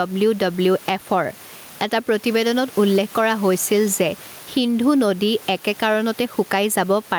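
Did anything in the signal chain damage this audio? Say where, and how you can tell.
Yes. The damage is at the input stage. The microphone gain was likely set far too high, with a fast limiter or compressor then clamping the level on every loud syllable. Throughout the speech, the gain swings by around 10 dB, while the room noise sits about 28 dB below the talker. This gain pumping narrows the gap between loud and quiet passages and leaves the speech sounding squashed.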